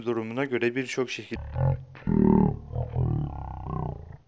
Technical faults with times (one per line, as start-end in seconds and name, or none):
1.36-4.28 wrong sample rate